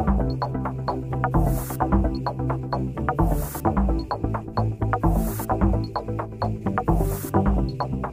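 No technical faults can be heard anywhere in this audio.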